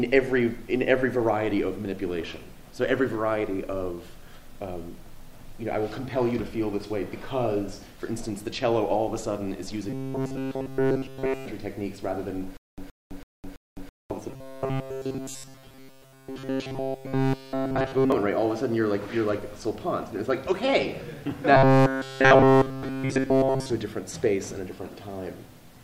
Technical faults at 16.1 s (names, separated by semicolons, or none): robotic sound from repeated short buffers